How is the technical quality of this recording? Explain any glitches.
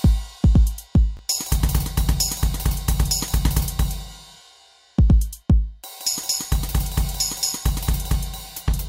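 There's one glitch, a brief stumble. From 1.17 to 1.19 s, chunks out of order: one 10 ms block arrived a chunk late and played after its neighbour, causing a quick jumbled flick.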